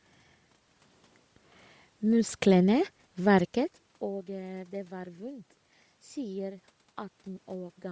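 From start to finish the speech carries a breathy, grainy edge, with a noise-like hiss where the upper detail should be. This is most likely Bluetooth LC3 compression at a low bitrate, which fits about 32 kbps with 10 ms frames, replacing discarded high frequencies with filler noise. The band stops near 8 kHz, and the level shift around 3.5 s comes from the talker moving.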